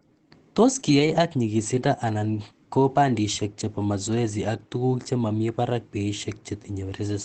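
From 0.79 to 1.17 s there is a lost packet rebuilt from error correction. Packets went missing, and the decoder filled in from the lower-bitrate copies that the following packets carried. About 200 ms of speech in that stretch is rebuilt, which fits roughly ten separate packets. There is no gap or dropout. The repaired section sounds coarser and noisier than the surrounding speech, on top of the ordinary Opus coding texture of the call path, whose audio extends up to 8 kHz.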